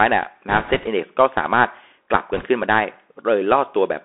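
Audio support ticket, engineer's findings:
Bluetooth CVSD headset codec, whole clip. Speech band-limited to roughly 300 Hz–3.5 kHz. Granular hiss under speech, scratchy sibilants, distortion on loud high content. Step-size adaptation can't keep up. Sound fits a 64 kbps one-bit delta link.

Bit errors on a Bluetooth voice link, 0.48–0.88 s and 2.33–2.46 s. Rushing, crackly noise over speech, no sharp clicks. Flipped bits each nudge the step slightly, then decay. Error rate around 2 percent, then nearer 3 percent in the heavier second burst.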